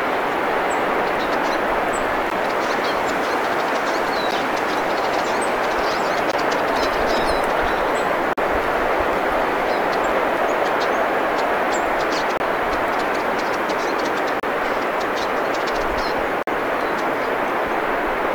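Brief hard-edged dropouts to silence, from a few to nearly 50 ms long, cut the sound every two seconds: at 2.30, 4.31, 6.32, 8.33–8.38, 10.37, 12.37–12.40, 14.40–14.43 and 16.43–16.47 s. This is a gap between stream segments: timestamps on consecutive 2-second segments don't quite meet, and the player fills the hole with silence.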